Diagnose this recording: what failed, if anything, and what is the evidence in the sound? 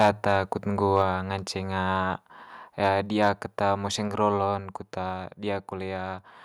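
The loudest speech peaks break up with a harsh, crackling edge at 0.0 to 0.1 s, 0.97 to 1.01 s and 3.22 to 3.28 s, most strongly at the start, where the signal overshoots by about 6 dB, against about 1 dB and 2 dB later. The likely cause is microphone overload at the converter stage, with the input set too hot. On a waveform the peak tops are flattened, a few percent of samples at worst, and a spectrogram shows broadband smearing above the voice harmonics at those moments.

Right after the second overload, at 1.02 s, the speech and the background both fall by about 3 dB in a single step and stay lower. This points to the microphone volume being stepped down, likely by the call processing reacting to the distorted peak just before and cutting the device's input gain in one move. A waveform shows a sudden, permanent drop in envelope height. On a spectrogram the whole band dims at once, noise floor included, rather than fading gradually.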